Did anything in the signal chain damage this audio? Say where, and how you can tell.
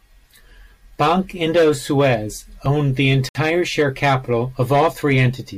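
Yes. A dropped buffer (overrun) at 2.66 s, in the driver or buffer stage, is heard as a small jump in the speech with no gap. The capture software likely failed to read its buffer before the hardware overwrote it, so a few milliseconds vanished and the two edges were spliced directly.

A Bluetooth stall from 3.29 to 3.35 s, at the playback stage, cuts the speech to 62 ms of silence before it resumes. Radio interference likely delayed packets, the headphones' buffer emptied, and output paused until the retransmitted audio arrived.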